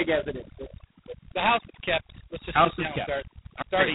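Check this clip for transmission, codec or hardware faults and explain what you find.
Two faults run through the whole speech clip, from start to finish.

Overdone noise removal: the background drops and breaks up into twinkling specks. A heavy-handed denoiser is cutting bands it mistakes for noise, along with quiet parts of the speech.

G.726 ADPCM: a harsh, rasping hiss rides on the speech and swells with its level, and nothing is heard above 3.9 kHz. Very few bits per sample describe each difference from the codec's prediction, which fits 16 kbit/s.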